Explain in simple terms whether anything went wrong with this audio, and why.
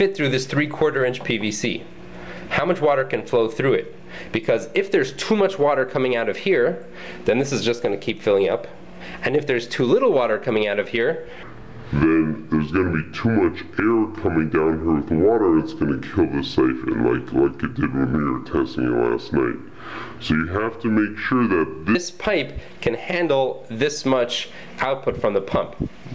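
A wrong sample rate fault runs from 11.43 to 21.95 seconds: the audio is played back slower than it was recorded, which fits 24 kHz material played at 16 kHz. The sound drags at two-thirds speed and drops about seven semitones lower in pitch.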